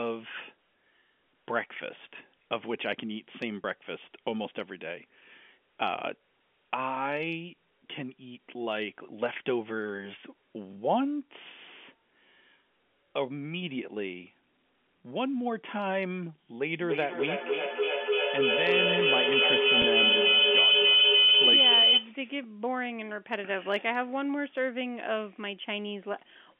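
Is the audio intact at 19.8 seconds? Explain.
No. Two faults overlap there. A feedback howl runs from 16.61 to 22.19 s. Two devices in the same room joined the call, so sound from one loudspeaker re-entered the other microphone and gained level on every round trip. The repeats grew instead of dying away and narrowed to a tone near 3 kHz, inside the telephone line's 200 to 3400 Hz band. That tone pulses roughly every 0.3 s and peaks about 9 dB above the speech.

Inside that howl, from 19.82 to 19.84 s, there is packet loss with pitch repetition. About 20 ms of audio went missing, which points to a single lost packet. The receiver filled the gap by repeating the last pitch period and fading it out. Because the gap is so short, the fill sounds like a slightly held, buzzy note rather than a dropout to silence.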